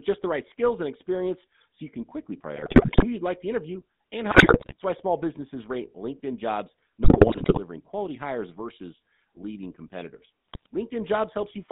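The whole speech clip runs through the GSM full-rate codec. It rebuilds the voice from a vocal-tract model and a coarse pulse excitation. The result sounds buzzy and gravelly, and the damage is plainly audible. The line passes only about 150 Hz to 3.7 kHz.

GSM bit errors break in four times: 2.56 to 3.05 s, 4.30 to 4.74 s, 7.04 to 7.59 s, and 10.48 to 10.66 s. Corrupted bits reach the decoder and scramble the filter, pitch and gain values. The voice squawks, pops and gargles there.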